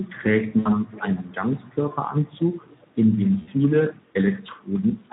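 Throughout, the speech has the plainly audible hoarse, noisy grain of the Speex codec, whose CELP coder is short of excitation bits; the damage fits a low setting near 11 kbps. From 0.59 to 0.71 s, and again from 3.41 to 3.5 s, VoIP packet loss concealed by the speech codec stretches the last sound into a fading buzzy tone or coloured noise instead of leaving silence. Each gap fits about 60 ms, or three lost frames, and the voice stays weak briefly afterwards.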